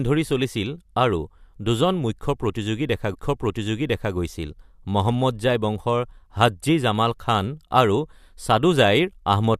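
At 3.14 s the speech jumps back with a small blip and replays about a second of what came before, running to 4.14 s. This is a stream segment repeated: the player fetched or queued the same segment twice, adding 1.0 s of duplicated audio.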